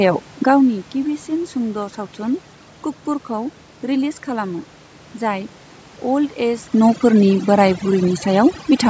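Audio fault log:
throughout, overdone noise removal: the room noise is pulled down and breaks up into twinkling specks, as single frequency bands near the noise estimate are switched off and on. Quieter parts of the speech are removed with the noise.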